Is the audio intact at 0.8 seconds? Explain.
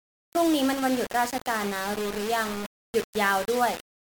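No, the speech at 0.8 s carries low bit depth without dither across the whole clip, likely from samples rounded to about 4 bits with no dither. The rounding error tracks the signal, so the sound turns grainy and gritty, with distortion only about 10 dB below the speech.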